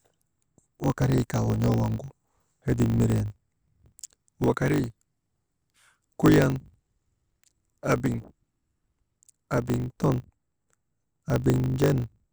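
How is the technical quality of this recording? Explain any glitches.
The technical quality is compromised by one fault that runs through the whole recording: a block size mismatch (truncated). One processing stage writes longer blocks than the next reads, which fits 1024-sample blocks, so each block's tail is discarded. The speech therefore carries a steady 50 Hz buzz from the regular cuts and runs about 1.07 times too fast, while staying near its normal pitch.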